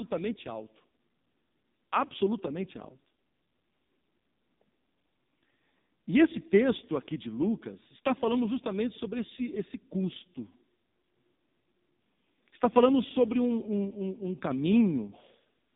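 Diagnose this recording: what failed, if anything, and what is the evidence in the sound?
Codec stage: AMR narrowband mobile codec throughout, with nothing above 3.8 kHz and a heavily buzzy, synthetic speech character. This fits a low-rate AMR-NB mode near 5 kbps.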